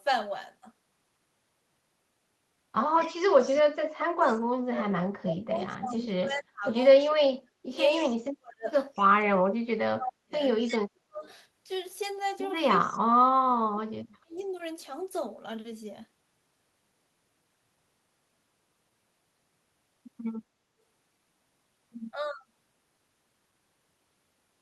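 At 2.98 to 3.08 s, and again at 3.43 to 3.62 s, there is an echo leak. A faint delayed copy of the speech comes back about 234 ms late, around 20 dB below the main voice. It sounds like brief scraps trailing the talker. The likely cause is a far end on loudspeaker whose echo canceller let part of its microphone pickup through.

From 3.07 to 11.26 s, speech is suppressed in double talk. For about 7 s of that span the voice dips hard, at worst by around 40 dB. The likely cause is an echo canceller that could not tell the talker from the loudspeaker echo while both sides spoke, so it turned everything down. It happens again from 12.68 to 14.54 s, with about 2 s affected and equally deep drops. At 22.32 to 22.41 s there is a last, slight dip of about 5 dB.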